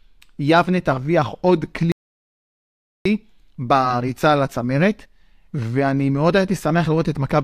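Speech recording with an audio dropout to silence: the input was likely lost, through a disconnected device or failed link, while silence kept being written. From 1.92 to 3.05 s the speech cuts off abruptly into silence with no room tone, and about 1.14 s of speech is gone.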